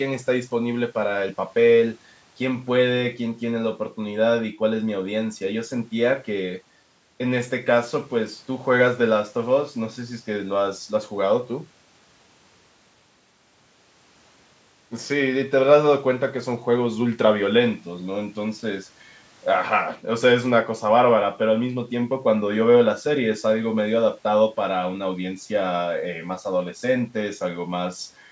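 No technical faults can be heard in the speech: it carries the usual traits of a call's microphone processing, with the lowest bass taken out by its high-pass filter and nothing above 8 kHz, and neither is a fault.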